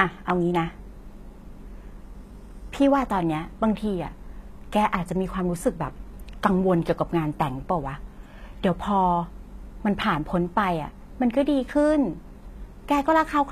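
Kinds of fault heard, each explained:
HE-AAC compression: likely a low-bitrate encode near 20 kbps that rebuilds treble from copied lower bands, leaving s sounds gritty and metallic, with nothing above 14.9 kHz.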